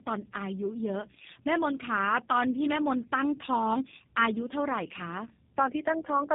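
Speech that sounds rough, muffled and warbly for the whole clip, the signature of tandem speech coding: two low-rate speech codecs in a row, likely GSM full rate then G.729A, the second re-coding the first's artefacts. A spectrogram shows nothing above 3.8 kHz and smeared, blotchy formants.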